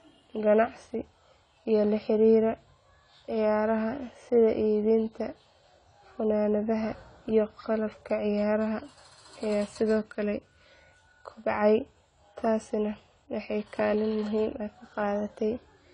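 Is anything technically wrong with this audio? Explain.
Yes. Throughout the speech, nothing is heard above 10 kHz, and sibilants fizz and warble; likely AAC compression at a low bitrate near 24 kbps. Unlike a simple low-pass filter, its quantisation leaves smeared, watery artefacts within the band as well.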